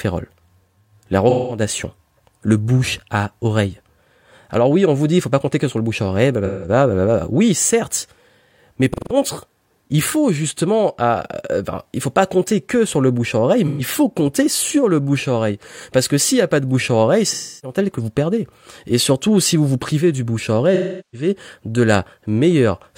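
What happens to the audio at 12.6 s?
Nothing goes wrong at 12.6 s; the speech carries on intact through that moment with no dropout, click or distortion.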